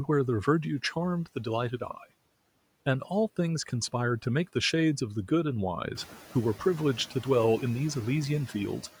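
Noise suppressor artifacts run through the whole clip. The suppressor cuts bands it judges to be steady noise, about 17 dB, frame by frame. The background sinks in the pauses and swells back under the speech. Near 6 s the room noise rises about 13 dB, sitting roughly 18 dB below the speech, so this pumping becomes easier to hear.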